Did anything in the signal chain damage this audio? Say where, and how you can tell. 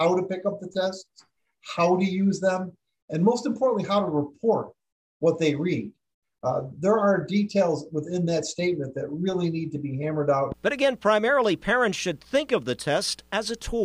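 Yes, a loud pop at 10.52–10.54 s, a single thump a little louder than the sound, which carries on beneath it. That points to a voltage step, likely from a plug or switch in the analogue wiring, rather than a dropout.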